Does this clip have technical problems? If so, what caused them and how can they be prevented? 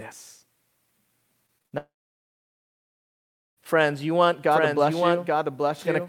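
Yes. From 1.46 to 1.74 s the speech turns choppy and robotic. This is repeated packet loss. Four packets went missing in quick succession, the longest gap about 56 ms. Each hole was patched by stretching the last sound, so about 41% of that short span is filler rather than real audio. Pieces are missing. A larger jitter buffer, forward error correction or a steadier network connection would prevent this.

At 1.78 s the audio cuts out until 3.59 s. This is a long network dropout, likely a stall in the connection that delivered nothing for about 1.8 s. The receiver briefly carries the last sound on as a fading buzz. Then about 1.7 s of silence follows. When the audio returns, the lost part is simply gone. A more reliable link, or redundant transmission that can recover a stalled stream, would prevent this.

From 4.52 s, just after "you want", a second copy of the speech runs underneath until the end. 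This is a doubled audio track. The copy trails by roughly 0.7 s and sits about 5 dB below the original. It is full-band and dry, with no room decay, and it starts abruptly. The likely cause is the same audio being captured twice through a slower path. Routing the source only once, or muting monitoring and loopback paths, would prevent this.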